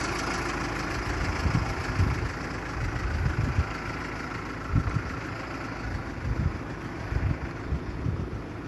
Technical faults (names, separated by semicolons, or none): generation loss